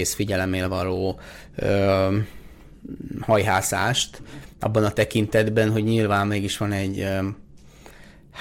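Speech with hard clipping from 3.31 to 3.84 s and 4.77 to 5.61 s, where peaks driven about 4 dB past the ceiling are cut flat, adding harsh crackle.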